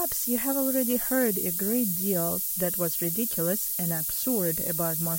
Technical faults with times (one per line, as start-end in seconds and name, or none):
0.00-5.19 low bit depth with noise shaping